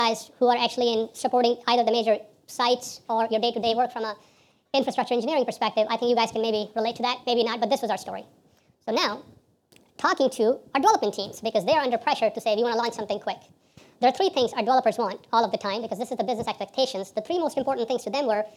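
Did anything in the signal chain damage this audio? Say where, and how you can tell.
Yes. The damage is at the playback stage, and it runs through the whole clip. This is a wrong sample rate fault. Everything moves 1.5 times too fast. Pitch sits about 7 semitones high, close to a fifth. Speed and pitch shift by exactly the same ratio, so nothing was time-stretched. The samples were simply clocked out too quickly, with no rate conversion. A 3:2 ratio fits audio captured at 32 kHz being played at 48 kHz.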